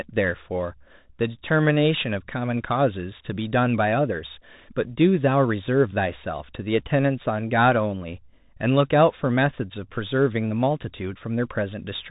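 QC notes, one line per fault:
throughout: Bluetooth CVSD headset codec. The spectrogram shows a flat ceiling at 3.8 kHz. Slope-limited one-bit steps leave scratchy sibilants and a granular noise floor, which fits a 64 kbps link.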